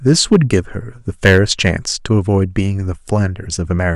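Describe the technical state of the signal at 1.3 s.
At 1.3 s the signal is in a stretch of hard clipping that runs from 1.25 to 1.70 s. The speech there arrives about 8 dB hotter than the stage carrying it can pass, so every peak that exceeds the ceiling is sliced off flat. Those squared-off tops generate harmonics reaching high up the spectrum, and the loud syllables come out with an audibly distorted edge.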